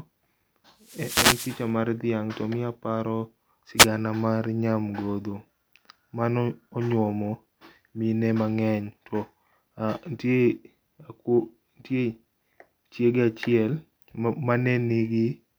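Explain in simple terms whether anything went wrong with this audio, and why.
Yes, something went wrong. There are two wireless microphone noise hits. The first runs from 0.81 to 1.70 seconds. The second comes just after "to miyo aparo", from 3.77 to 3.87 seconds. Each sounds like a burst of static sweeping over the speech. The radio link from the microphone briefly weakened. Reflected signals cancelled the main one. The receiver's own hiss then rose.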